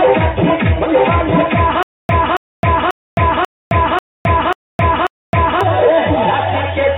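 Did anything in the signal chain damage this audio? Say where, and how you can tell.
Yes. From 1.83 to 5.61 s there is a stutter with silent gaps: a 276 ms burst returns seven times, each followed by 264 ms of digital silence, every 540 ms. The playback buffer likely stalled and replayed its last fragment on each retry, so the audio due there is lost.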